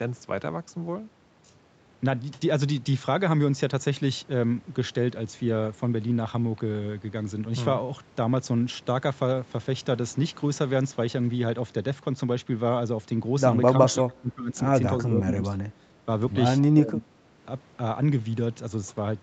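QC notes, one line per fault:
13.85 to 17.1 s, speech suppressed in double talk: likely the echo canceller mistook overlapping talk for echo, so the speech dips by up to about 25 dB at 13.85–14.69, 15.07–15.59, 15.77–15.9 and 16.75–17.1 s.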